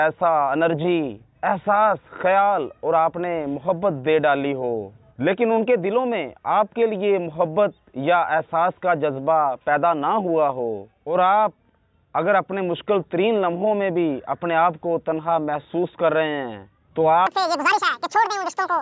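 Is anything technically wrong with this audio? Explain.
Yes. A wrong sample rate fault runs from 17.27 s to the end at 18.81 s. The samples play back at twice their intended rate without conversion, which fits 8 kHz material played at 16 kHz. The sound runs at double speed and rises a full octave, 12 semitones, becoming thin and hurried.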